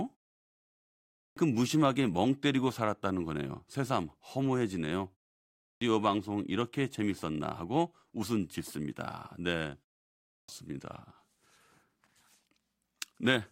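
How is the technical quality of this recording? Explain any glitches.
The recording has one recurring glitch, a clipped start after a pause, at 1.13 s, 5.56 s and 10.23 s. After each silence, the output device needs roughly 235 to 254 ms to wake, swallowing the phrase's opening. The waveform jumps abruptly from flat to full level, and the spectrogram shows onsets sliced vertically.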